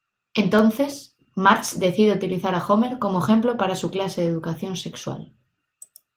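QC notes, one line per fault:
0.59–1.25 s, CD scratch ticks: five short ticks, the longest a couple of milliseconds, at roughly six per second. A surface blemish corrupts more data than error correction can rebuild on each disc revolution, so the player conceals the bad samples, leaving audible clicks.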